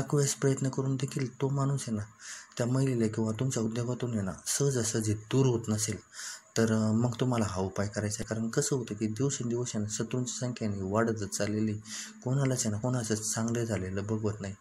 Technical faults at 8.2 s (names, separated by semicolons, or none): damaged data in a compressed stream